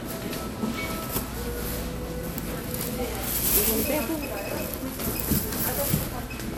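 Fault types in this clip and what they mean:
MP2 compression: The likely cause is MPEG Layer II coding at a low bitrate, around 80 kbps. Too few bits reach the 32 sub-bands. Upper bands switch on and off, giving a plainly audible gurgling, granular texture. Nothing sounds above 18 kHz.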